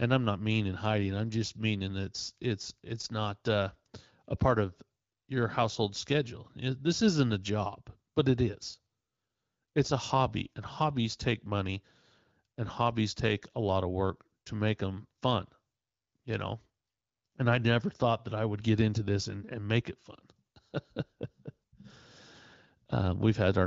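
Speech carried over the AMR wideband (HD Voice) codec at 15.85 kbit/s, a rate at which the codec keeps speech clear, with no technical faults to report.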